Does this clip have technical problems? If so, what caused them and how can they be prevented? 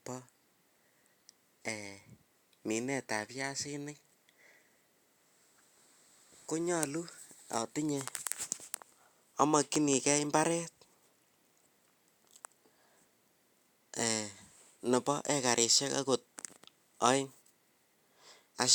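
No, nothing stood out as a technical problem on listening, so there is no cause to trace and nothing that needs preventing.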